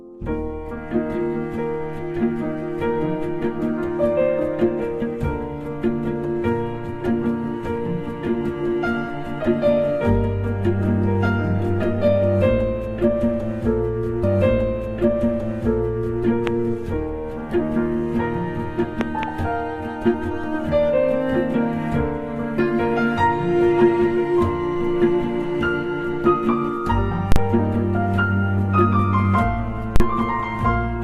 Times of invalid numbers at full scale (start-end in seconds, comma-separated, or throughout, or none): 27.32-27.36, 29.96-30.00